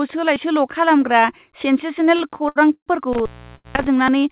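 A speech recording heard through a narrowband call path, with nothing above 4 kHz, which fits G.711 mu-law at 64 kbps. From 2.18 to 2.89 s there are repeated stalls (stutter). The jitter buffer ran dry four times as packets arrived late, and each time the receiver extended the last sound rather than going silent. That filler adds up to 234 ms, about a third of the span, and the longest hold is 129 ms. Nothing is lost, so the speech drags and judders instead of skipping. The repetition is what separates this from a single late packet. From 3.13 to 3.87 s an intermittent contact opens the line for about 0.40 s in total. Here the sound actually drops away to faint hiss, with crackle where the connection breaks and remakes. That is unlike a stall, where the audio is held and sustained rather than interrupted by noise. Inside that stretch, from 3.55 to 3.67 s, there is also a short stall from a late packet. 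One packet came 89 ms late, and the receiver stretched the preceding sound for 89 ms before resuming at the same point. The result is one drawn-out moment with a slight buzzy or dipped quality, a single isolated hold rather than the clustered stutter heard earlier. At 4.08 s there is a small jump forward in the sound, losing only a few milliseconds. This is likely a dropped buffer (overrun), where samples were overwritten before being read and the two sides were spliced together. It differs from the stalls because audio is removed rather than stretched, and because it leaves no gap or hiss, unlike the contact fault.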